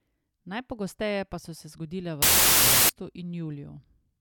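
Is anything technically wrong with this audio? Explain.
Yes. From about 2.22 to 2.89 s there's a wrong sample width fault: the data seem to be read as 16-bit samples when they were written as 32-bit, so each real sample splits into two values. That yields loud noise with the speech buried underneath, playing at half speed and an octave low.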